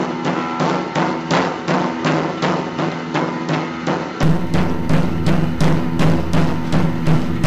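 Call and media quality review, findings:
Music dull and boxy 0.0–4.23 s, nothing above 7.6 kHz, level roughly 5 dB lower, added noise around 30 dB down; clears abruptly at 4.23 s, no gap. Likely input switched to a poorer device: narrower-band microphone or headset call profile, swapped back mid-recording.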